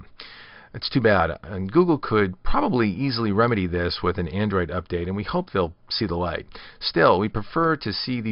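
No audible technical faults are present anywhere in the recording.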